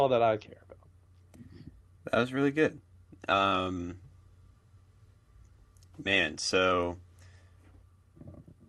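No faults are audible in this speech; the call path's codec coding shows as the top end stopping at about 12 kHz, which fits an Opus super-wideband setting.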